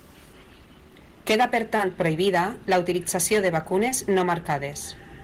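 Hard clipping runs through the whole of this speech clip: the level is driven about 10 dB past what the signal path can carry, so roughly 2 percent of samples hit the ceiling and are sliced flat. Those squared-off peaks add high harmonics, heard as crackle and harshness on the loudest syllables. Short concealed packet loss occurs at 1.76 to 1.80 s and again at 3.89 to 3.92 s, where about 30 ms and then 20 ms of audio failed to arrive in time. The decoder papered over each gap by extending the preceding sound for about 23 ms and 19 ms before fading back into the real signal, which leaves a brief smear or wobble at each spot.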